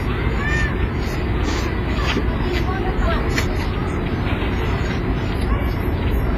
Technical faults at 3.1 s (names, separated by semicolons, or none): WMA compression